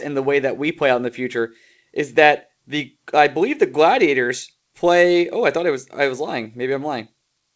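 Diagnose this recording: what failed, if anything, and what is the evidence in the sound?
Nothing failed; the call path behaves as expected.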